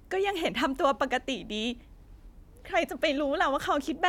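No technical faults can be heard in this recording.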